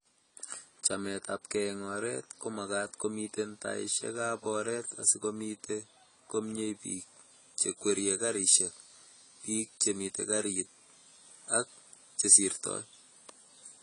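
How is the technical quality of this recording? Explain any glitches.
The speech has two problems, one across the whole clip and one in the second half.

AAC compression is plainly audible throughout, likely from AAC-LC at a low bitrate, around 24 kbps. There's nothing above 10 kHz, so it sounds dull. The encoder quantises the spectrum coarsely, which leaves a smeared, warbly or fizzy texture on sustained sounds and sibilants.

From 6.76 s to the end, pre-emphasis has been left on. The treble boost, consistent with the CD-style 50/15 µs curve, never got its matching de-emphasis. The top end sits about 8 dB high at 10 kHz relative to 1 kHz, which makes the voice thin, bright and sibilant.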